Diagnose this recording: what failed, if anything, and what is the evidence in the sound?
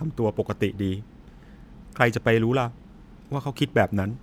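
Nothing stood out on listening to this speech recording that would point to a failure at any stage of the chain.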